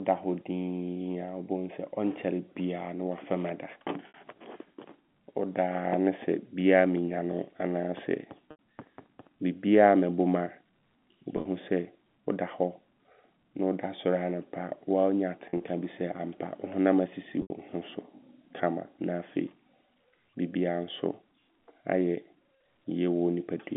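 Brief buzzy, held-note stretches that fade into silence on the longer gaps, at 4.08 s after "biaa ne wafam ada", 8.51 s, 11.37 s, 15.50 s and 17.42 s between "honam asisi" and "ho so", are packet loss with pitch repetition: 60 to 90 ms went missing, bridged by repeating the last pitch period.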